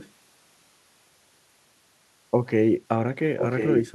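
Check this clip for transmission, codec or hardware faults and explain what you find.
There is an echo leak, at two points. A delayed copy of the speech returns about 1.04 s after the original. From 0.00 to 0.11 s it is faint, well below the direct speech. From 3.38 s to the end it is much stronger, nearly as loud as the speech itself. The likely cause is a far-end loudspeaker whose echo canceller failed to remove everything its microphone picked up, so the residue was sent back down the line.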